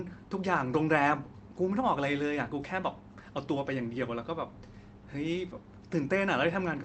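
Nothing goes wrong anywhere in this speech; it has simply come through a call path that's doing its job, with the top end stopping at about 8 kHz, which fits an Opus link running at a modest bitrate.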